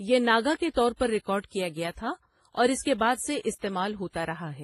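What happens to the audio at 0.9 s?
At 0.9 s you're hearing transcoding between lossy codecs, which runs through the whole clip. The speech sounds smeared and swirly with nothing above 13 kHz, likely from a low-rate WMA encode re-encoded to AAC-LC, the second codec layering its own artefacts on the first.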